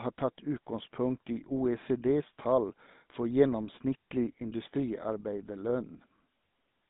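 From start to finish the speech carries the damage of the GSM full-rate codec, plainly audible as a buzzy, gravelly roughness on every voiced stretch. The coder rebuilds the voice from a vocal-tract model fed by a sparse, regularly spaced pulse excitation, which fits a 13 kbps bitrate. On a spectrogram the energy sits between 150 Hz and 3.7 kHz with nothing above, and harmonics look smeared and grainy rather than cleanly striped.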